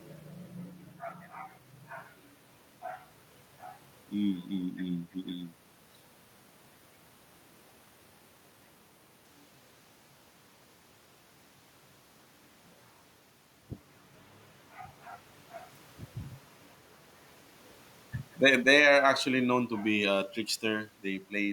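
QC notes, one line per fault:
18.31–20.30 s, automatic gain falling: the speech and the room noise behind it sink together by about 6 dB over roughly two seconds, so the whole scene dims rather than just the voice. The automatic gain control judged the input too loud, or its background noise too strong, and eased its gain down step by step. Because the background drops in step with the speech, this is a gain change in the system, unlike the level shifts near 5.5 s and 13.5 s, where the talker moved relative to the microphone.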